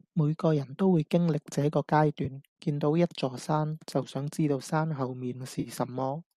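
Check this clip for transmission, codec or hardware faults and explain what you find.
Two brief dropouts stand out in this speech, both AAC frame loss with concealment. At 2.25 s there is a tiny smeared, phasey blip. From 5.60 to 5.69 s a longer noisy, washed-out patch lasts about 50 ms, consistent with several consecutive lost frames. In each case the decoder patched the gap by reusing the last good spectrum with altered phase and energy. The light graininess throughout is likely from low-delay AAC compression.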